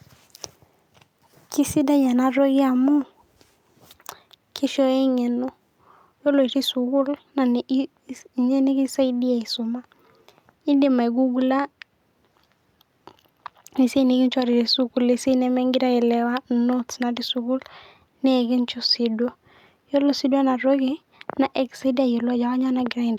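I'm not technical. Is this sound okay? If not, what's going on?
Yes, nothing in this recording stands out as a technical problem. There is no moment in it that needs a closer look or an explanation.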